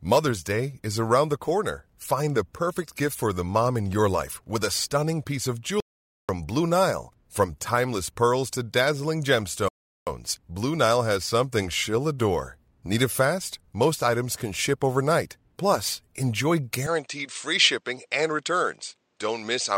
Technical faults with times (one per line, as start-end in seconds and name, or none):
5.80-6.29 audio dropout to silence
9.68-10.07 rebuffering stall
16.87-19.77 input switched to a poorer device